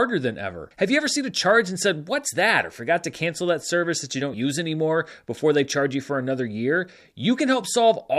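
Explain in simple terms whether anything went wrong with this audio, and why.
Yes, there are two small jumps in the speech, both caused by compressed frames skipped. At 2.26 s, between "a charge and said" and "that or forgot to", roughly one short chunk of sound is missing. At 4.33 s, between "that service that you" and "use anymore before they", roughly two chunks are gone. The sizes fit frames of about 26 ms. Unlike a dropout, there's no silent gap; the sound just leaps forward.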